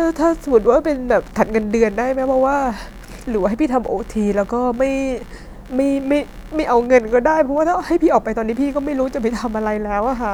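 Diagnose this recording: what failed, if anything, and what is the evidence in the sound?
Computer activity noise is present for the whole clip. The failure sits in the analogue wiring stage. A buzzing, chirping texture runs under the speech from start to finish. It pulses at around 70 times per second. It sits roughly 30 dB below the speech. It does not follow the speech. The processor, graphics card or mouse changes its current draw, which shifts the ground the audio circuit shares with the computer. That ground movement lands directly in the signal.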